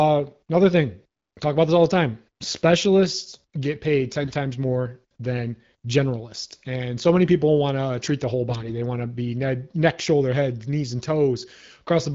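From 4.20 to 4.34 s, and again from 8.50 to 8.72 s, AMR bit errors corrupted the weakly protected bits of the speech frames. Each burst fits roughly seven and eleven 20 ms frames, with a few percent of bits flipped. The checksum over the critical bits still passed, so the decoder used the damaged data. Misplaced excitation pulses and skewed gain and spectral values make the sound briefly hoarse and gargly while its pitch and loudness roughly hold.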